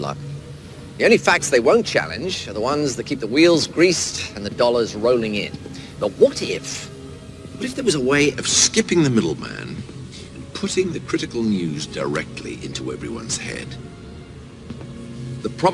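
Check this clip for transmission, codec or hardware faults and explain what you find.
One fault is present. Wrong sample rate, from 0.0 to 8.34 s: the samples are clocked out faster than they were captured, with no resampling in between. The speed-up is 1.09 times, which fits material recorded at 22 kHz but played back at 24 kHz. Because timing and pitch are tied to the same clock, everything runs about 9% quicker and sits 1.47 semitones sharp, giving the sound a brighter, hurried, slightly chipmunk-like quality.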